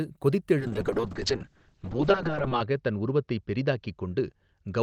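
A call bitrate drop hits this speech clip at 0.61 s: the encoder's target falls from 40 kbps to 6 kbps and holds near the bottom for about 2 s, with no recovery before the end. Starved of bits, the codec quantises far more coarsely and narrows the coded band from 20 kHz to 8 kHz, so the speech loses its top end and turns muffled, rough and watery.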